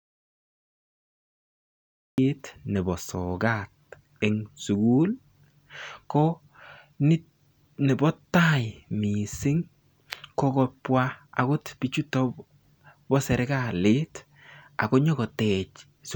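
From the very start the clip is dead silent, and the speech only comes in at 2.18 s, cutting in mid-flow rather than beginning naturally. That opening stretch is an audio dropout to silence: the input was likely lost, so silence was written in its place. What separates it from a quiet pause or a noise gate is the total absence of room tone, with whatever was said before 2.18 s simply gone.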